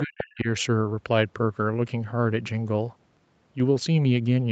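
Right from the start, 0 to 0.34 s, there's a second voice underneath, the other side's voice leaking through, sitting maybe 10 dB below the main talker. It's likely loudspeaker echo that the canceller didn't fully strip out of the mic signal.

Overlapping that, from 0.04 to 0.48 s, you get speech suppressed in double talk: the talker's own voice gets pushed way down, dropping by something like 40 dB at its deepest, over most of that window. That's likely the echo canceller treating both voices as echo and ducking everything.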